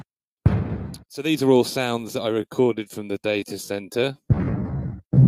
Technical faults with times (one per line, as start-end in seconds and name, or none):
2.28-5.28 time-stretched section